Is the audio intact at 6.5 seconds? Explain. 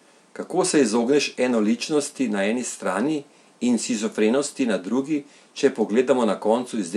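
Yes, at 6.5 seconds the speech runs on without any dropout, click or other audible fault.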